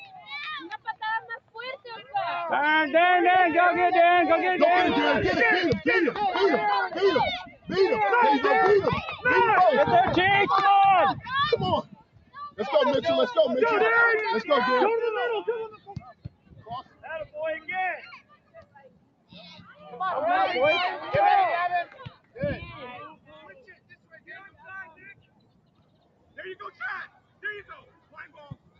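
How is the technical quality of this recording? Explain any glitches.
The recording is compromised by a speech noise suppressor running on non-speech audio. It passes through call microphone processing, with nothing above 8 kHz.

Noise suppressor applied to music or sounds: Throughout, the suppressor treats sustained content as noise, so the gain swings by roughly 15 dB and the sound pumps and thins.

Sound cut by the noise suppressor: At 0 to 2.14 s, 6.89 to 7.71 s, 11.82 to 12.59 s, 15.68 to 19.91 s and 21.86 s to the end, steady and decaying sound sinks by about 15 to 17 dB. Attacks survive while tails are clipped short.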